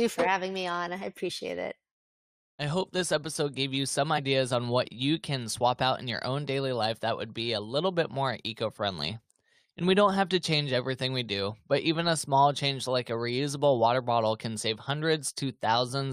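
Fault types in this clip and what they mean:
Damaged data in a compressed stream: a stretch of the encoded speech data arrived corrupted, with bytes lost, zeroed or overwritten. The decoder could not read those frames correctly, lost its place in the stream and had to hunt for the next valid frame header before decoding normally again. In this clip that shows as a brief glitch lasting about 20 ms, from 4.17 to 4.19 s.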